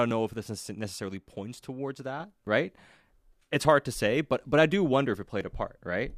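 A digital gain setting was likely applied in a single step rather than ramped, producing a sudden gain jump at 2.2 s, right after "this necessarily points towards". From one sample to the next, the speech rises by about 5 dB, and the background noise rises with it, so the whole sound steps up at once instead of the talker getting louder. The raised level then holds to the end of the clip.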